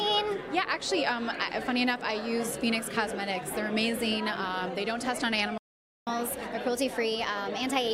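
At 5.58 s the sound cuts out mid-flow and stays silent until 6.07 s, a gap of about 0.49 s. This playback stall most likely came from the player running short of buffered data or having its output thread blocked, so nothing reached the output until it recovered.

From 6.07 s to the end, the audio resumes quicker and brighter in pitch. It runs 1.1 times faster and sits roughly a semitone and a half higher. This is catch-up at higher speed: the player resamples its backlog to win back some of the time lost in the stall.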